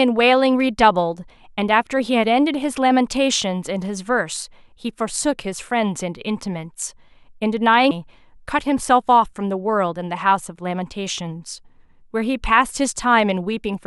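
At 7.90 s the speech jumps ahead with a brief blip, a stream segment skipped, likely because one chunk failed to load and playback resumed at the next. The waveform shows an abrupt discontinuity, and the spectrogram a thin vertical broadband line.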